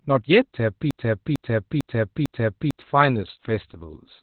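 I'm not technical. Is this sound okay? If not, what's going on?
No. From 0.91 s to 2.82 s there is a broken-record loop: a piece of speech about 0.45 seconds long plays four times in a row, exactly the same each time. The likely cause is a stalled player or stream repeating its last fragment, so the speech that belonged there is missing.

The whole clip also carries heavy Opus voice compression. It was squeezed hard for a low-data voice channel, which removed everything above about 4.4 kHz. That loss makes the speech sound muffled, and the coarse coding makes it slightly hoarse and robotic, like a poor phone line.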